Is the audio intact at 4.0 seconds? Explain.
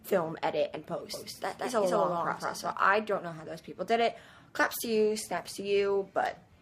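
Yes, the audio is intact at 4.0 seconds, with no dropout, click, distortion or other fault to be heard at that moment.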